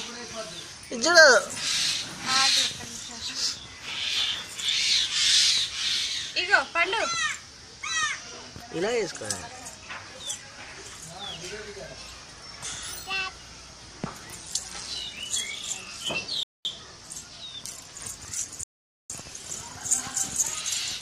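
At 16.43 s and again at 18.63 s the audio halts into silence for about 0.22 s and 0.46 s: a rebuffering stall, where playback starved for data and waited. Unlike a dropout, it resumes exactly where it stopped, skipping nothing and only adding time.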